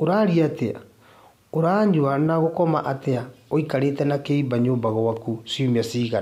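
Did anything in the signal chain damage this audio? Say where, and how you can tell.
Yes: a drift correction step from 2.44 to 4.25 s raises speech speed 5.45% and pitch about 92 cents, then snaps back, likely clock-matching buffer rate correction.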